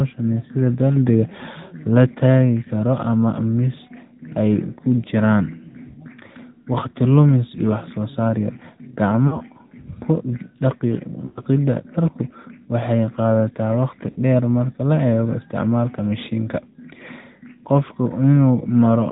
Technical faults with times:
0.00-19.11 AMR narrowband mobile codec
9.28-9.41 lost AMR speech frames
11.26-11.44 lost AMR speech frames
14.10-14.18 lost AMR speech frames

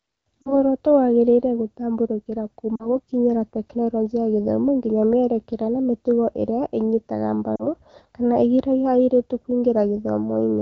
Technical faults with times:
0.42-0.64 lost AMR speech frames
2.76-2.88 lost AMR speech frames
7.55-7.67 lost AMR speech frames

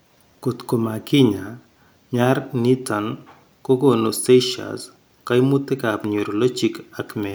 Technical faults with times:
3.93 dropped samples

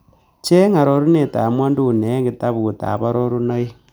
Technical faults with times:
none

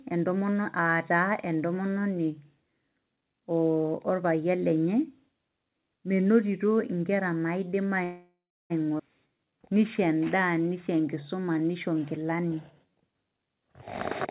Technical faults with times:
8.04-8.73 call audio freeze
8.98-9.02 skip ahead
9.28-12.92 jitter buffer slow-down

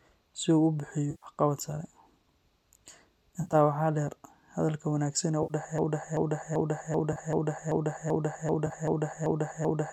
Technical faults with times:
1.10-1.26 AAC frame loss with concealment
3.41-3.55 AAC frame loss with concealment
5.43-5.53 AAC frame loss with concealment
5.78-9.92 broken-record loop
7.12-7.17 AAC frame loss with concealment
8.66-8.72 AAC frame loss with concealment

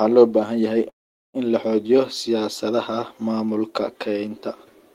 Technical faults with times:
0.89-1.36 call audio freeze

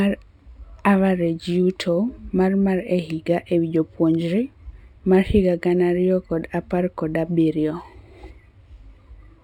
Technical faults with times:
0.00-9.44 imaging from linear upsampling

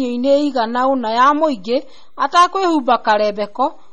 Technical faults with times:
0.00-3.92 MP3 compression

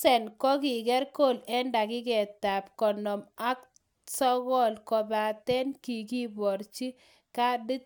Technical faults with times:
none

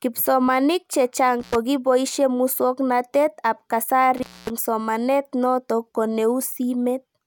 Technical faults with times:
1.40-1.55 intermittent contact
4.17-4.50 intermittent contact

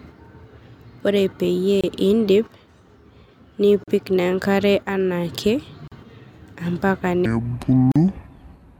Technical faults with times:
1.81-1.84 gap at a join of encoded pieces
3.84-3.88 gap at a join of encoded pieces
5.88-5.92 gap at a join of encoded pieces
7.26-8.79 section at the wrong speed
7.92-7.96 gap at a join of encoded pieces

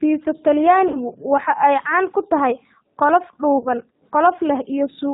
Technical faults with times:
0.00-5.13 G.729 codec
0.88-0.97 VoIP packet loss concealed by the speech codec
3.58-3.67 VoIP packet loss concealed by the speech codec

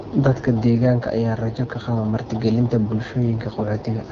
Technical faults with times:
0.00-4.11 AMR wideband (HD Voice) codec

